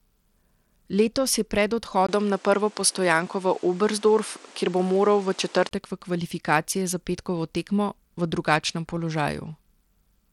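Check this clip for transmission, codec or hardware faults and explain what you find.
Two faults can be heard: codec damage throughout, and a stretch from a weaker input device.

Throughout the speech, the treble flickers and a gritty, aliased noise rides on the sound, most likely from Bluetooth SBC compression. With too few bits, the coder starves its top sub-bands and coarsely quantises the rest, which fits a stream of about 96 kbps. On a spectrogram, the high bands blink on and off in blocks.

From 2.07 s to 5.71 s, the sound turns duller and boxier, most likely because the input switched to a poorer device with a narrower band. It opens with a 20 ms silence, visible as a gap in the waveform. Nothing appears above 10.5 kHz on a spectrogram, a new noise floor sits roughly 30 dB below the speech, and the level shifts by a few dB.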